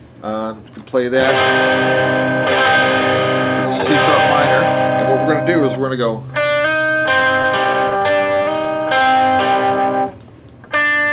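From 7.2 s to 9.08 s the audio shows repeated stalls (stutter): the jitter buffer ran dry 14 times as packets arrived late or slower than playback, and each time the receiver stretched the last sound to bridge the wait. The fills total 165 ms, with the longest gap about 23 ms and roughly 9% of that stretch concealed. Nothing is dropped, but the sound drags and hiccups over the narrowband call path, which has nothing above 4 kHz and fits a G.711 mu-law link.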